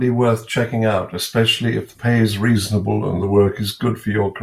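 Likely a clock-matching resampler stepping its rate, this drift correction step slows speech 6.2% and lowers pitch 111 cents from 2.56 to 3.52 s.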